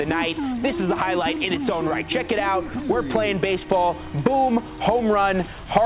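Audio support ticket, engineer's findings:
No faults found on listening. No defects heard to trace to any component.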